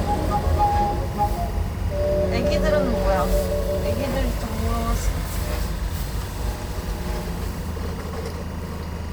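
Timecode bleed runs throughout. A steady chirping warble near 1 and 2 kHz, roughly 20 dB down, leaks in, which fits 23.976 frames-per-second code.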